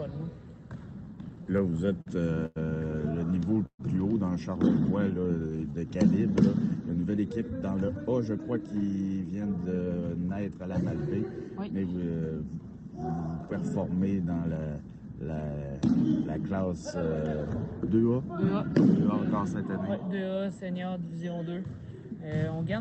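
From 1.15 to 2.08 s, packets kept arriving late and the jitter buffer ran empty nine times. These repeated stalls (stutter) add about 123 ms of continued sound, each gap 43 ms at most, so the audio drags and stutters.

From 2.46 to 2.58 s there is a short stall from a late packet. The buffer had nothing to play, so the receiver stretched the last sound for 99 ms until the packet arrived, and it hangs with a slight buzz or dip.

From 3.66 to 3.81 s the sound holds as a fading buzz or hiss, drops to 70 ms of silence, then resumes where it stopped. This call audio freeze was likely caused by packets held up in transit draining the jitter buffer.

From 5.20 to 6.31 s there is a jitter buffer slow-down. To build a reserve, the receiver repeated pitch periods and added 132 ms, so the audio runs at 89% speed at unchanged pitch, with drawn-out sounds.

From 8.06 to 10.68 s, and again from 21.33 to 21.64 s, there is a jitter buffer speed-up. 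With excess audio queued, the receiver removed pitch-period slices, roughly 0.3 s in the first stretch and a few tens of milliseconds in the second, so the audio runs about 11% and 10% fast at the same pitch and sounds hurried.

Throughout, the audio passes through the Opus call path, whose coding limits the top end to about 8 kHz.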